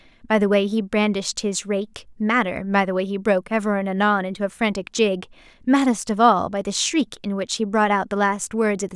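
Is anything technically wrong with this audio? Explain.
No, nothing technically wrong can be heard in this speech recording.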